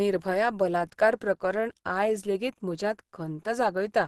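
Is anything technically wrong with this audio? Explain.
Yes. Throughout the speech there is Opus compression damage, plainly audible. The sound is muffled and hoarse, with a grainy, rough texture where detail should be. This points to a low-rate encode around 16 kbps, likely running in Opus's hybrid mode, where the lower band is coded as speech and the upper band is approximated. On a spectrogram, energy stops at a flat ceiling near 12.1 kHz, with smeared, noise-like fill just below it.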